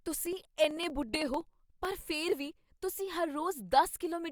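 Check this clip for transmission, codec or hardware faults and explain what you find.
One hardware fault is present: periodic USB or driver dropouts from 0.07 to 1.91 s, just before "ਫਿਰ ਵੀ ਤੁਸੀਂ". A recurring task stalls the bus every 63.5 ms, skipping about half a millisecond of speech each time and leaving roughly thirty evenly spaced ticks.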